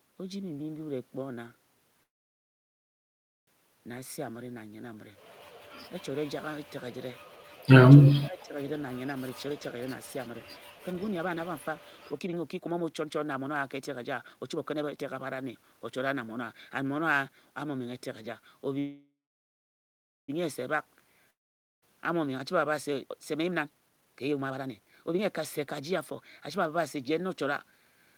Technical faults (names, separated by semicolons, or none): call audio freeze; speech suppressed in double talk; jitter buffer speed-up; long network dropout